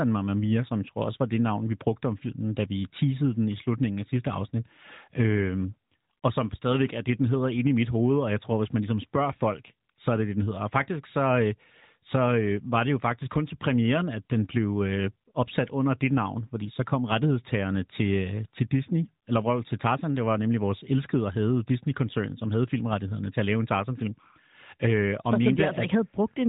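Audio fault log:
The speech signal is intact, carried over an AMR narrowband mobile link with nothing above about 3.8 kHz and the light codec texture expected at a rate that fits the 12.2 kbps mode.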